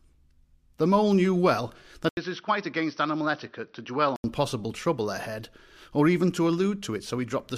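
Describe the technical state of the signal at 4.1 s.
At 4.1 s the speech is band-limited to 6 kHz and somewhat quieter and duller, likely an input switched to a poorer device, spanning 2.09–4.24 s, between "mole knew well" and "possible trouble ahead or", entered through an 80 ms gap.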